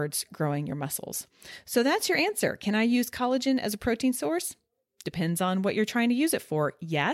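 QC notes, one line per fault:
Nothing to flag here; the speech comes across without any technical problems worth noting.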